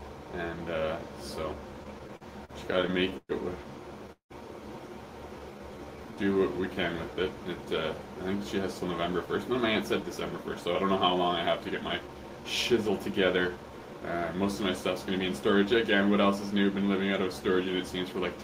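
From 1.83 to 3.31 s there are repeated stalls (stutter): a dozen brief gaps, the longest 119 ms, where late packets emptied the jitter buffer and the last sound was held, so the audio drags.

At 4.12 to 4.32 s the audio freezes for 181 ms, trailing into 120 ms of silence before resuming where it stopped. This is likely a call audio freeze from held-up packets.

Between 5.39 and 7.15 s a jitter buffer slow-down repeats pitch periods to rebuild reserve, adding 172 ms; the audio runs at 91% speed with unchanged pitch.

From 9.26 to 15.20 s a jitter buffer speed-up trims short pitch-period pieces, about 300 ms in total, to shed excess delay. The audio plays at 106% speed, slightly hurried.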